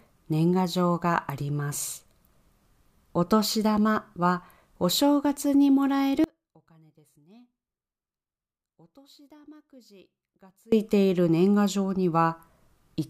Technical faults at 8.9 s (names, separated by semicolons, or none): audio dropout to a faint residue